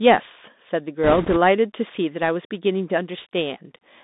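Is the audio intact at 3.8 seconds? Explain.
No. At 3.8 seconds the speech carries the Bluetooth CVSD headset codec distortion heard throughout the clip. Each sample is coded as a single up-or-down step that adapts slowly, so fast loud changes outrun the step and distort into scratchy sibilants and granular hiss, and the band is confined to roughly 200 Hz to 3.7 kHz.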